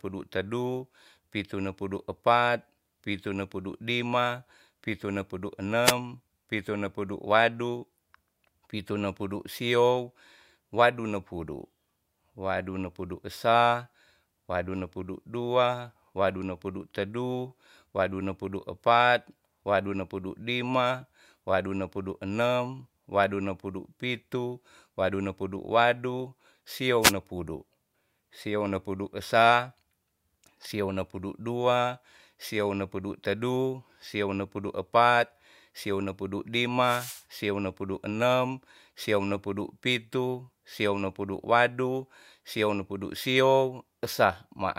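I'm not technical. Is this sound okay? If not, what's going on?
No. Three times there is a short swish or burst of static: at 5.83 to 5.93 s, right after "lima pitu ne pudu" and before "pitu ne pudu"; at 27.01 to 27.13 s; and at 36.79 to 37.25 s, the longest at about half a second. These are wireless microphone noise hits. The radio signal from the microphone to its receiver weakens for a moment, and the receiver's own hiss rises.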